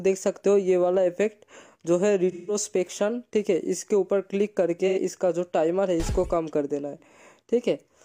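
The audio suffers AAC frame loss with concealment at 2.31 to 2.55 s and 4.87 to 4.99 s. In each gap the decoder rebuilt the missing frames from the last good spectrum, so the sound turns into a smeared, noisy or phasey patch. The 170 ms and 85 ms gaps fit four and two lost frames.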